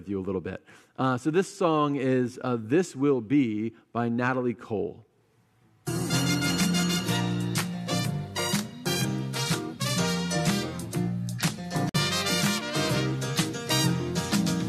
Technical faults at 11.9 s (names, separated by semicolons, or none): gap at a join of encoded pieces